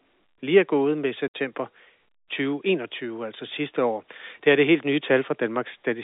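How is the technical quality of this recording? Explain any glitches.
The speech comes through a telephone-band channel, with nothing above about 4 kHz, and has one clear dropout.

At about 1.28 s there is packet loss filled with silence. Some of the speech never arrived, and the receiver played plain silence in its place. The hole lasts 60 ms, which fits three lost 20 ms packets. The sound stops dead and restarts abruptly.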